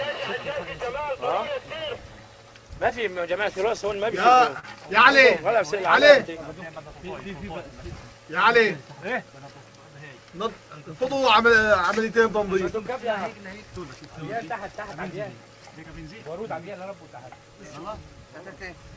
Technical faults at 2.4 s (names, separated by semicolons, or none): none